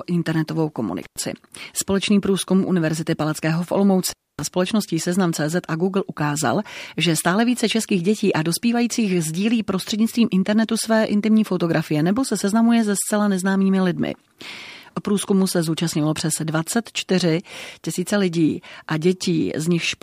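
At 1.03 s the speech drops out for about 100 ms, and at 4.09 s it cuts again for about 260 ms. Both are intermittent contact: a loose plug or cable connection briefly opens the signal path. Each gap is bounded by crackle as the contact breaks and remakes, and while the line is open faint hiss remains. The second break is the longer of the two.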